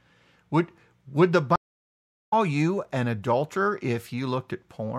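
At 1.56 s, right after "would the", the speech cuts to dead silence for about 0.76 s, the signature of a stream reconnect. The connection dropped, the player went quiet, then rejoined the stream with a freshly started decoder. When sound returns at 2.34 s with "you an adulterer", it has skipped ahead by roughly half a second, so material is missing. On a waveform this is a flat gap. A spectrogram shows a clean vertical blank band, then a soft onset as decoding restarts.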